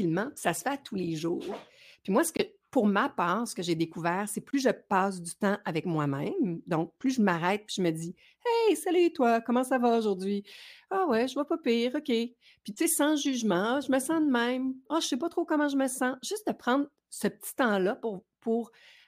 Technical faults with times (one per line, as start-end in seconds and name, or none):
2.37-2.41 corrupt frame muted
4.51-4.54 corrupt frame muted